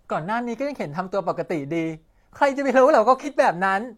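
At 3.20 s the speech shows AAC frame loss with concealment, lasting to about 3.28 s. About 43 ms of coded audio is missing, which fits a single lost frame. The decoder had nothing to play there. It rebuilt the gap from the last good spectrum, copying its energy with scrambled phase. The loss is short, so there is no fade to silence. It sounds like a brief smeared, noisy or phasey patch before clean sound resumes.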